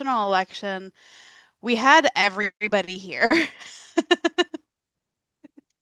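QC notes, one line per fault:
2.41–2.89 s, repeated stalls (stutter): packets arrived late four times within this half second, and each time the jitter buffer ran dry. The receiver held the last sound to cover each wait, with the longest gap about 30 ms. Roughly 60 ms of filler sits inside the span, about an eighth of it. Nothing is lost. The speech hitches and drags in small catches.
3.25–3.32 s, short stall from a late packet: one packet missed its slot and the buffer emptied. The receiver stretched the preceding sound for about 50 ms until the packet came, then resumed from the same point. No speech is missing. The sound is simply held a touch too long, with a faint buzz or dip. The playout delay grew by about 50 ms here.
4.75–5.16 s, jitter buffer slow-down: the buffer was rebuilding its reserve. The receiver repeated single pitch periods and fragments of pauses, adding about 36 ms. 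This section plays at 93% speed with the pitch unchanged. Sounds come out drawn-out, at times with a slight warble. The audio passes through an Opus call path, band-limited to 12 kHz.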